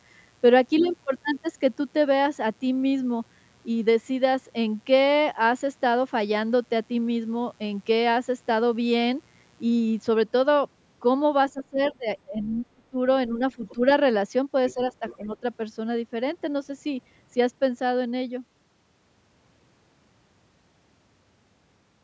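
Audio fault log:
0.0–10.04 s, mains buzz: a steady, raspy 60 Hz buzz sits about 40 dB under the speech for the first ten seconds. That rasp comes from sharp switching spikes twice per mains cycle, spraying harmonics well up into the kilohertz range, rather than a clean hum.
11.53–12.97 s, 13.28–13.82 s, 14.74–15.43 s, speech suppressed in double talk: the talker's level dips in pieces, deepest around 25 dB in the first stretch, then roughly 10 and 15 dB. The echo canceller likely couldn't tell the talker from the far end while both spoke, so it ducked everything.
11.85–11.89 s, 12.43–12.47 s, 13.66–13.73 s, 14.69–14.74 s, 15.07–15.15 s, other side's voice leaking through: short scraps of a second voice pop up, around 25 dB under the speech, the last one nearer 20 dB. Most likely leftover loudspeaker echo the canceller didn't fully strip from the mic.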